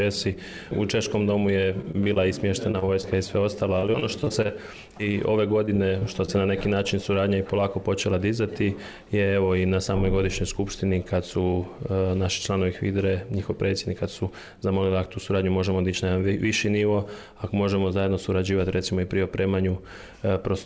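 From 1.82 to 3.05 s and again from 3.79 to 6.30 s, the audio turns choppy and robotic, with short dropouts. This is repeated packet loss: each missing fragment is patched by stretching the previous sound, up to about 40 ms at a time. Nothing is heard above 8 kHz, which fits a G.722 call path.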